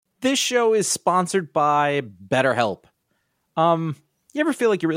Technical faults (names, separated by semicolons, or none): none